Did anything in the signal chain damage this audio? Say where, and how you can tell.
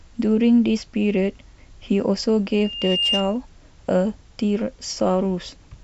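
Yes. Loudspeaker feedback squeal. The microphone was picking up the loudspeaker it was feeding, so the fault sits in the acoustic and analogue loop around playback, not in any digital stage. At 2.8 kHz the gain around that loop passed one, so the frequency kept reinforcing itself. From 2.52 to 3.38 s a single pure tone at 2.8 kHz grows over roughly half a second until it is about as loud as the speech, then stops.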